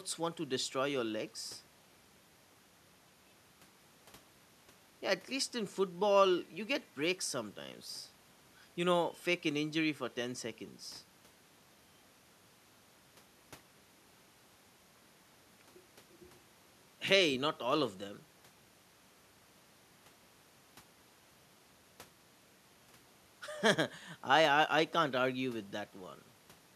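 No technical faults can be heard anywhere in the speech recording.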